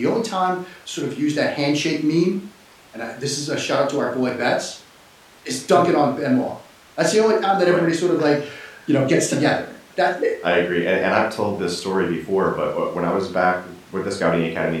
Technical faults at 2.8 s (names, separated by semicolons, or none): none